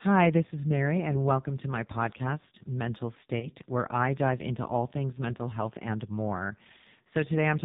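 Speech here went through the AMR narrowband mobile codec at a low rate, which fits the 5.9 kbps mode. The 8 kHz path removes everything above 4 kHz, and the sparse pulse excitation leaves heavy codec damage: the voice sounds buzzy and synthetic throughout. At 3.40 to 3.49 s, lost AMR speech frames interrupt the stream, consistent with a single dropped 20 ms frame. The decoder fills the gap by repeating the previous pitch and vocal tract settings at reduced gain, which gives a brief dip or warble before normal decoding resumes.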